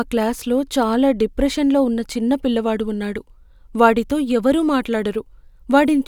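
Nothing stood out on listening to this speech recording.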